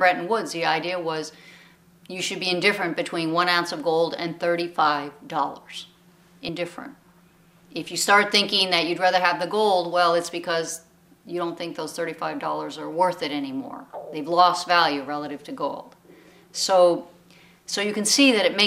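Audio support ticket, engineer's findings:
Brief smeared blip at 6.48 s, sound jumps forward, no hard click. Compressed frames skipped: about two frames, roughly 50 ms, missing or rejected as damaged by the decoder. Jump fits a 26.1 ms frame length; frame overlap softens the join.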